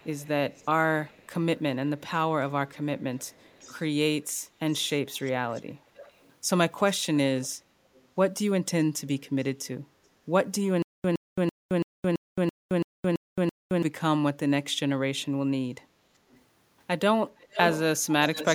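From 0.0 to 6.32 s and again from 7.42 to 8.07 s, an echo leak adds a faint copy of the speech about 25 dB down, trailing by roughly 395 ms and then 417 ms. The likely cause is a far-end loudspeaker whose echo canceller let part of the signal back. On a spectrogram, each syllable's harmonics reappear as a weaker ghost shifted about 0.4 s to the right.

Between 10.82 and 13.83 s, a stutter with silent gaps repeats one 116 ms burst nine times, with about 218 ms of digital silence after each, a steady 333 ms cycle. This likely comes from a stalled stream replaying its last fragment on each retry. The waveform shows identical blocks separated by flat silent stretches, and the lost audio is not recovered.

At 16.13 to 16.28 s, the background is gated by the echo canceller. It clamped the microphone while the loudspeaker played, so the room tone dips by about 8 dB for roughly 150 ms. The spectrogram shows a brief, faint vertical stripe across the noise floor.

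The echo leak then returns at 16.31, 17.37 and 18.33 s, with delays of 458 to 468 ms. It is faint at about 35 dB down, then strong at about 5 dB down, then about 10 dB down, so the later ghost copies come much closer to the level of the speech itself.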